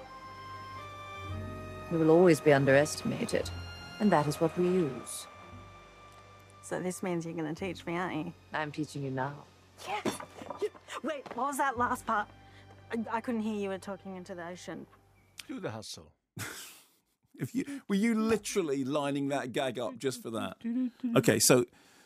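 From 20.28 to 20.8 s there is zipper noise. The level moves by around 10 dB in unsmoothed 2 dB steps, roughly ten a second, and each jump ticks. The waveform envelope looks like a staircase, and a spectrogram shows faint vertical lines at each step.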